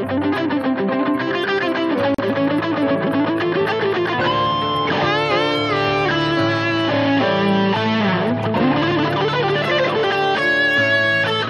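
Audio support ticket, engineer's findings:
Gap at a join of encoded pieces, 2.14–2.18 s: 40 ms gap in continuous sound, codec-smeared edges. Probable component: concatenation step; encoder start delay and final-frame padding left untrimmed. Resumes where it stopped, where a dropout would skip material.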